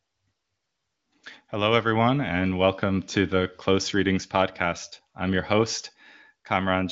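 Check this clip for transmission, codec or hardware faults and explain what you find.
No transmission, codec or hardware faults are audible here.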